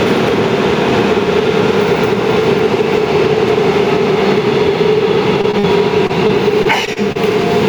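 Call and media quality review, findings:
Gain pumping, whole clip: gain swings by around 5 dB. Likely cause is input gain set too high, driving a fast limiter. Unlike dropouts, it breathes continuously.

Short concealed packet loss, 5.41, 5.51 and 5.59 s: brief smears of about 20 to 40 ms. The receiver extended the last sound, then crossfaded back. These are three isolated events, not a sustained robotic run.

Repeated packet loss (robotic sound), 6.07 to 7.17 s: seven patched gaps, the longest about 32 ms, give choppy audio. Consecutive concealment chains make it distinct from the isolated smears just before it.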